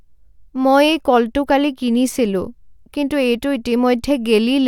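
No technical faults can be heard anywhere in the recording.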